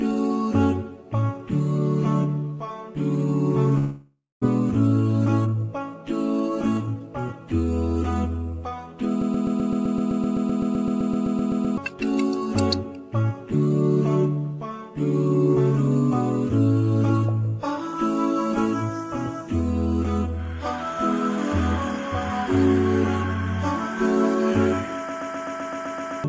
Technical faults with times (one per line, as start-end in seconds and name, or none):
3.78-4.43 long network dropout
5.45-6.02 jitter buffer speed-up
6.50-7.40 jitter buffer speed-up
9.22-11.78 system hang loop
25.09-26.24 system hang loop